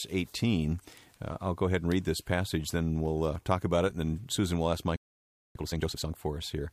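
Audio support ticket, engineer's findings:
Playback stall, 4.96 to 5.55 s: speech cuts to silence mid-flow right after "will ask", gap about 0.59 s, then resumes. Likely player-side underrun or blocked audio thread starving the output until recovery.

Time-compressed catch-up, 5.55 to 6.13 s: speech immediately after the gap runs hurried at 2x, pitch unchanged. Player draining the backlog built during the stall by dropping short segments and cross-fading the joins.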